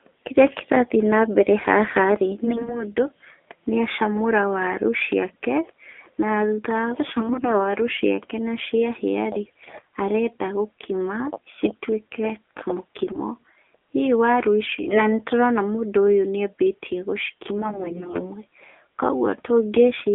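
The whole clip carries the AMR narrowband mobile codec. The speech sits between 300 Hz and 3.5 kHz, with nothing above. It sounds plainly buzzy and synthetic, as a vocal-tract model driven by sparse pulses does. This points to a low mode near 7.4 kbps.

AMR bit errors strike six times: 2.44 to 2.84 s, 7.18 to 7.68 s, 9.46 to 9.84 s, 13.04 to 13.20 s, 14.64 to 15.10 s, and 17.58 to 18.29 s. Flipped, weakly protected bits misplace the excitation pulses. Pitch and level hold, but the voice turns hoarse, scratchy and gargly, worst near 9.5 s.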